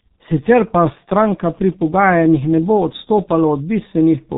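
Throughout the speech, G.723.1 codec damage is heavy. Nothing reaches above 3.8 kHz, and the coarse voice model, which fits a rate near 6.3 kbit/s, updates too slowly to track fast changes, so the sound is muffled and hoarse with smeared consonants.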